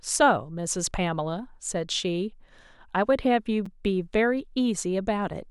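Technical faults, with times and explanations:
3.66 s, block of digital silence: about 7 ms of samples in the speech were replaced by zeros. The signal drops straight to digital silence and returns with no fade, and a gap this short is heard as a tick or dip rather than as silence.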